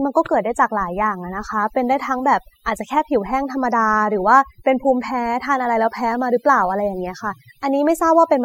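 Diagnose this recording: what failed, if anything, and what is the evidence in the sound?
Across the whole recording the pauses drop to near silence scattered with twinkling specks. This is overdone noise removal. A noise reduction stage set far too strong cuts individual frequency bands whenever they sit close to its noise estimate. The low-level detail of the voice falls under that threshold and is removed with the noise.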